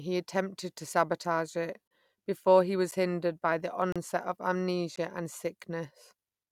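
Speech, interrupted four times by a gap between stream segments: a hard-edged silent hole of about 33 ms at 1.88 to 1.91 s, about 9 ms at 2.91 s, 33 ms at 3.92 to 3.96 s and 15 ms at 4.96 s. The roughly one-second spacing matches segment boundaries whose timestamps leave a small gap that the player fills with silence, so nothing is lost but time is added. Separately, a block of digital silence only 0.39 ms long at 3.82 s drops the signal to zero and back with no fade, leaving a brief tick rather than an audible hole. A block that short fits an output buffer that was not filled in time.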